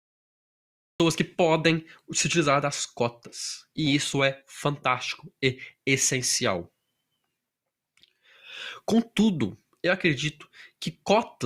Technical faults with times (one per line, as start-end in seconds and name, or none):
0.00-1.00 cut-off start